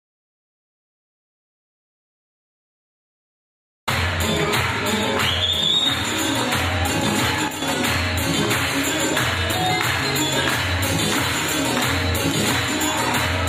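The audio opens in dead silence, with no room tone at all, and the sound only arrives at 3.87 s. That is an audio dropout to silence already under way when the clip begins, likely from a lost input or mute while the recorder kept writing empty samples, so anything before that point is missing. From 7.48 to 7.62 s the sound and its background noise drop together by about 7 dB with no fade, a sudden gain jump likely caused by a digital gain change applied without a ramp.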